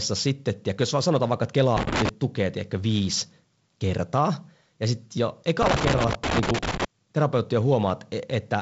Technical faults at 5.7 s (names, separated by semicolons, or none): loose connector crackle